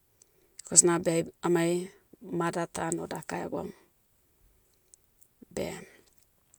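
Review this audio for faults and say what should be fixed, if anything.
Nothing to fix here; I listened to the whole recording and didn't hear any technical faults.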